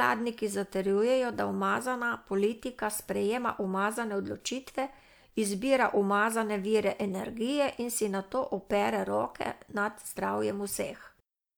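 No technical faults detected.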